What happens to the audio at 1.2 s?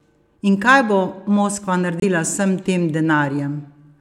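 Nothing goes wrong at 1.2 s; the speech there plays through intact, with no dropout, click, glitch or other fault.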